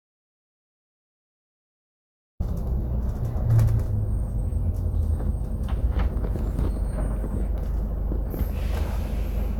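From the start of the clip to 2.40 s there is an audio dropout to silence: the sound is already absent when playback begins, with no room tone at all, then cuts in abruptly. The likely cause is a lost input while zeros were still written.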